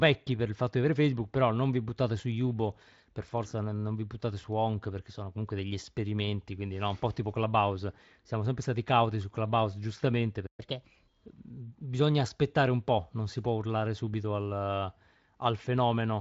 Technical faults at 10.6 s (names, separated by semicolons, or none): playback stall; catch-up at higher speed